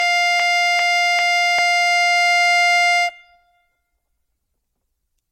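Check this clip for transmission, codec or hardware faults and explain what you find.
Two faults are audible in this music: generation loss throughout, and a broken-record loop at the very start.

From 0.00 to 1.59 s, a broken-record loop is already under way. A 0.40 s fragment repeats exactly, three times back to back, likely because the player or stream stalled and kept resending its last held piece. Unlike a buffer-underrun stutter, nothing goes silent, and the music meant for that span is simply lost.

Throughout, there is generation loss. The sound is swirly, hollow and smeared, attacks are blurred, and nothing remains above 16.2 kHz. This fits AAC-LC at around 64 kbit/s, likely re-encoded several times, with each pass quantising on a shifted frame grid. A single encode would not compound the artefacts this far.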